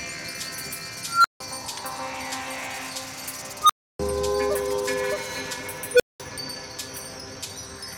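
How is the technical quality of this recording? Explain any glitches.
The recording has three unstable filter bursts, at 1.07–1.40 s, 3.62–3.99 s and 5.93–6.20 s. In each, a recursive filter runs away and a tone swells to clipping, over 177 ms, 78 ms and 68 ms, before overflow cuts the output to silence for 160, 300 and 200 ms. The first two squeal near 1.5 kHz and the last beeps around 500 Hz. A spectrogram shows a brightening horizontal line ending in a blank gap, and the waveform shows a flat-topped envelope followed by a dead stretch.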